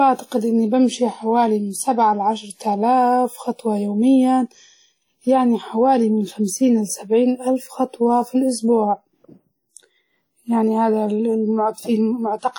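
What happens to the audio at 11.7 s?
At 11.7 s the speech carries the same washy, ringing transform-codec smear heard throughout, likely WMA compression at a rate that fits about 48 kbps. Unlike band-limiting, content reaches 20.1 kHz.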